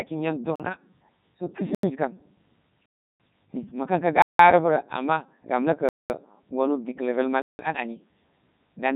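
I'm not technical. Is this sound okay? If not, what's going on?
No. A Codec 2 vocoder has processed the speech from start to finish. Instead of keeping the real recording, it sends a rough description of the voice and rebuilds it from simple tones. That makes it sound robotic and buzzy, with nothing above 3.8 kHz.

There are also six blocks of digital silence, at 0.56, 1.75, 2.86, 4.22, 5.89 and 7.42 seconds. They last from 0.04 s up to 0.34 s. At each one the sound drops out abruptly and comes back with no fade.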